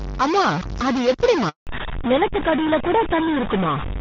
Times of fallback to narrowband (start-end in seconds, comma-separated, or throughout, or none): 1.67-4.01